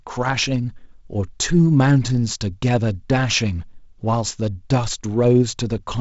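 No faults are audible in this speech; it passes through G.722 wideband telephone coding, with nothing above about 7.7 kHz and the slightly noisier lower band that fits the 48 kbit/s mode.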